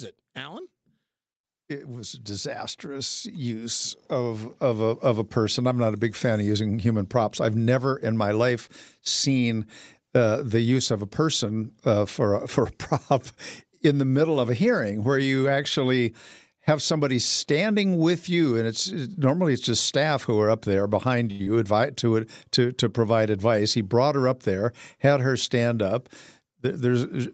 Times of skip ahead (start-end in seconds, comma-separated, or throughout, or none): 21.43-21.49